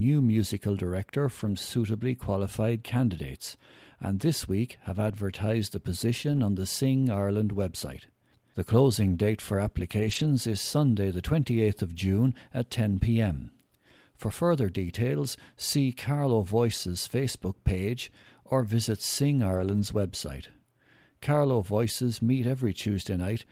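Lost packets rebuilt from error correction occur at 1.39 to 1.53 s, after "musical director" and before "suitably qualified candidates and"; at 5.07 s, after "and this week have"; at 6.31 to 6.37 s, before "on the"; at 9.99 to 10.25 s; and at 19.53 to 19.83 s. Each time, the decoder filled lost packets with the low-bitrate copies carried in the following packets, so there is no gap. Instead, 80, 20, 40, 140 and 160 ms stretches sound rougher and noisier.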